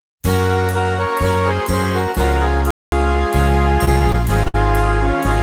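At 2.71 s the sound stops dead and stays silent until 2.92 s, a gap of about 0.22 s, before carrying on. This is a playback stall, most likely the player running short of data or its output thread being held up, so nothing reached the speakers until it caught up. On a waveform it shows as a flat line cutting abruptly through ongoing signal. A spectrogram shows a clean vertical blank band across all frequencies, with hard edges on both sides.

From 3.85 s to 4.56 s the sound turns choppy. This is repeated packet loss: five separate holes open up in quick succession, the longest about 60 ms, with roughly 140 ms missing in total. Around 128 ms of that was patched by stretching the preceding sound. On a spectrogram the stretch looks striped, with short smeared or repeated slices broken by narrow gaps. The waveform shows an uneven, stuttering envelope.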